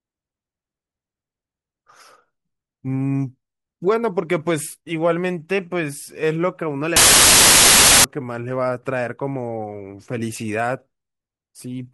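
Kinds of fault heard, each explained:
Samples built from the wrong bytes: from 6.96 s to 8.04 s, roughly 1.1 s, the speech is replaced by a loud, harsh broadband noise. The bytes forming each sample are being combined incorrectly, whether offset by one byte, swapped in order or misaligned, so the rapidly varying low-order bits land in the most significant position.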